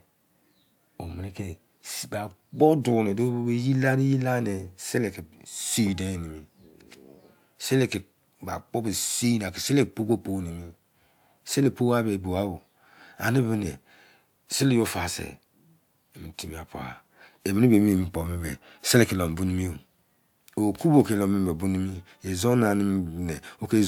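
No technical faults can be heard anywhere in the recording.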